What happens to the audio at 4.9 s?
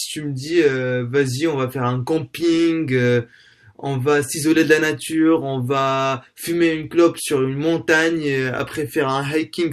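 Nothing goes wrong at 4.9 s; the speech carries on intact through that moment.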